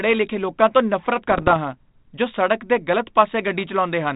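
From 1.28 to 1.57 s, between "ਲਿਖੇ ਲੋਕਾਂ ਨੂੰ ਨਫ਼ਰਤ" and "ਹਾਂ ਜੋ ਸਡ਼ਕ ਦੇ", the speech breaks into pops and rough, crackling bursts with brief jumps in level. These are bit errors on an ADPCM link, at roughly half a percent. Each flipped bit throws off the decoder's step size and prediction, so the damage rings on for milliseconds across what sounds like a dozen or so frames of the G.726 stream, which otherwise carries light 32 kbit/s coding.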